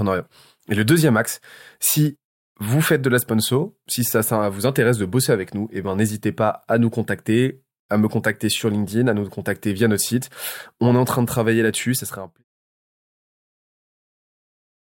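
A speech recording with nothing technically wrong with it, ending in a smooth fade-out that begins at about 12 s and finishes by 12.45 s.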